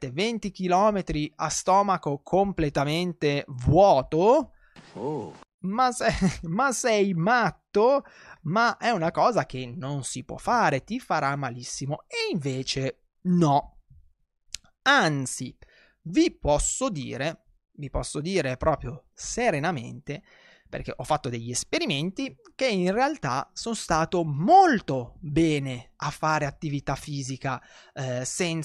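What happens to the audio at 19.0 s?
Nothing goes wrong at 19.0 s; the speech runs through that moment intact, with no dropout, click, distortion or other fault.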